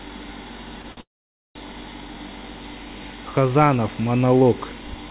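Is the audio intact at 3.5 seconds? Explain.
Yes, at 3.5 seconds the speech is intact, with no dropout, glitch or distortion, only the narrow call-path sound with nothing above 4 kHz.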